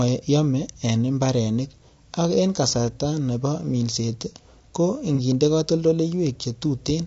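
From the start, the speech is rough and grainy, with noise filling the gaps between harmonics and a thin, synthetic-sounding top band. This is likely low-delay AAC compression at 32 kbps, whose short frames resolve pitch harmonics poorly at that rate.

At 5.15 to 5.20 s, just after "kasarta nebo minset ko", a brief smeared, noisy patch marks AAC frame loss with concealment. About 30 ms of audio went missing, consistent with one lost frame, and the decoder rebuilt it from the previous spectrum.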